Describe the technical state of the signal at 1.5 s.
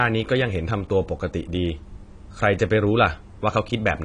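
At 1.5 s the speech sounds dull and smeared, with plainly audible compression damage and nothing above 10.1 kHz. This holds throughout the clip. The likely cause is AAC compression at a low bitrate, consistent with AAC-LC near 32 kbps, which lowers the cut-off and coarsely quantises each frame's spectrum.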